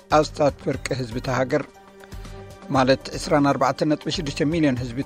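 Nothing stood out on listening.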